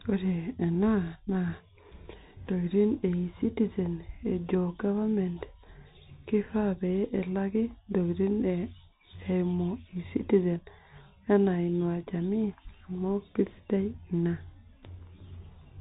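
From start to end, the speech carries Bluetooth CVSD headset codec damage. Nothing passes above 3.8 kHz, which fits a 64 kbps one-bit delta stream. Sibilants sound scratchy over a granular hiss.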